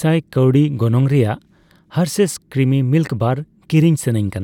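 No audible faults here.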